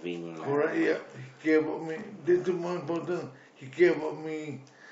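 No technical faults are audible.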